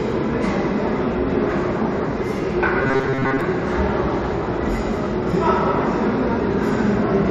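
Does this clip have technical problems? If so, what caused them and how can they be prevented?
Yes. From 2.82 to 3.41 s the sounds turn hard and metallic, with a rigid buzz at 134 Hz laid over them. This is robotic sound from repeated short buffers, the likely cause being audio arriving too seldom, so the player kept looping its last fragment of about 7.5 ms while the real audio was skipped. Most of that stretch is repeated material. Preventing it means giving the stream a larger jitter buffer and steady delivery.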